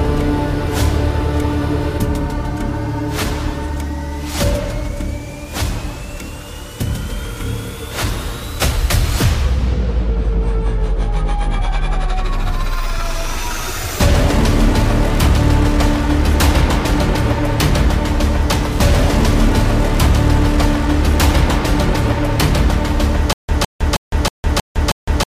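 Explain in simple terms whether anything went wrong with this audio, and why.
From 23.33 s to the end, a stutter with silent gaps: a 0.16 s burst repeats six times, each followed by 0.16 s of silence, likely from playback stalling.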